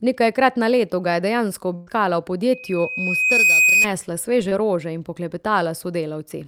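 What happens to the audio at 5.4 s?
Nothing goes wrong at 5.4 s; the speech carries on intact through that moment with no dropout, click or distortion.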